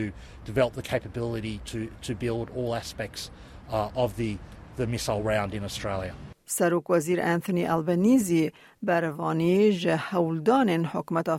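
Nothing stood out as a technical problem on listening to the audio.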